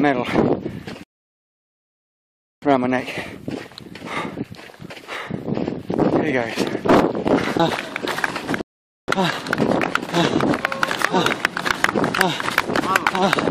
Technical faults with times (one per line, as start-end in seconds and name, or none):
1.03-2.62 rebuffering stall
8.61-9.08 rebuffering stall